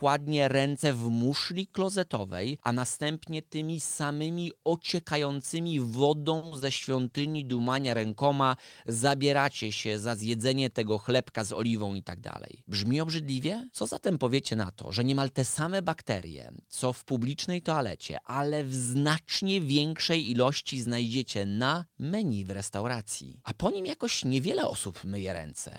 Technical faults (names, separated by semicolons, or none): short stall from a late packet; short concealed packet loss; call bitrate drop; jitter buffer speed-up